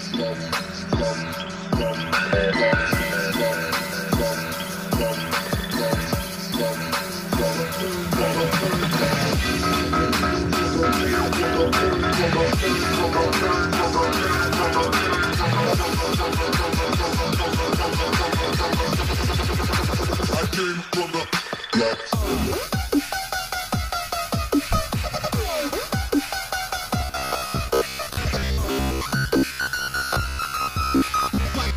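From 27.01 s to 31.76 s a rigid 66.8 Hz buzz overtakes most of the audio: robotic sound, likely from repeated short buffers of about 15 ms, not silent gaps.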